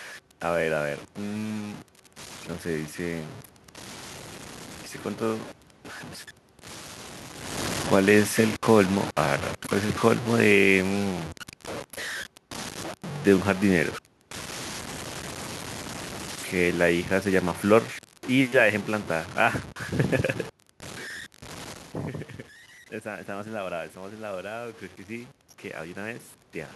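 Low bit depth without dither runs from start to finish. The speech carries a coarse, grainy distortion that tracks the voice, roughly 15 dB below it. Quiet syllables and decays turn gritty or sputter. This is likely truncation to very few steps, which fits about 6 bits.

Automatic gain falling occurs from 7.78 to 11.28 s, just after the talker shifts position near 7.5 s. The gain control eases its level down by 6 dB, so the voice and the room noise behind it sink together.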